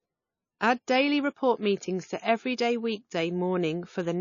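From start to finish the speech sounds dull and muffled, with a swirly, smeared grain. A spectrogram shows a hard ceiling with nothing above 7 kHz. This is low-bitrate audio saved at a high bitrate: likely an MP3 encoded around 25 kbit/s, then re-saved at a far higher rate that cannot restore what was lost.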